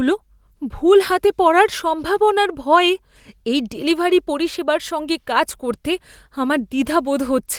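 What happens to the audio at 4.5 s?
Nothing goes wrong at 4.5 s: the speech passes through intact there, carried by Opus voice compression in its hybrid mode at 24 kbps with only light coding damage, and no dropout, glitch or distortion breaks in at that moment.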